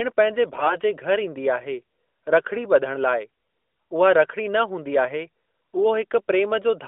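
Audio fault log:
0.54–0.77 s, AMR bit errors: the narrowband mobile audio briefly turns hoarse and gargly while pitch and level hold. Roughly 7 percent of the weakly protected bits flipped, misplacing excitation pulses, unlike frame loss, which mutes or smears.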